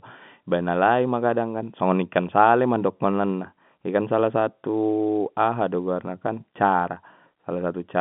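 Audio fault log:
No faults found; the speech sits in a telephone band of roughly 150 Hz to 3.5 kHz, as expected from G.711 mu-law coding on the line.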